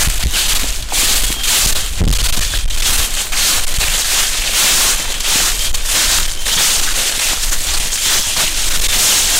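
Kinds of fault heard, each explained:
Hard clipping: A harsh, buzzing fuzz sits on every loud moment from start to finish. The signal is driven about 22 dB past what the stage can pass, so roughly a third of the waveform is sliced flat, spraying high harmonics across the spectrum.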